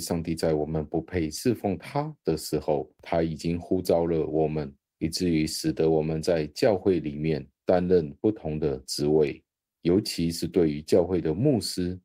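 Repeated timing corrections run from 0.12 s to 11.99 s across this speech recording: the receiver keeps trimming tiny slices out of the stream, always in the same direction and at uneven spacing, so the audio comes through at about 104 percent speed. Clock drift between sender and receiver, present for the whole clip, is the cause: the sending side's clock runs about 4 percent fast, so the jitter buffer keeps overfilling and must discard material to stay in step.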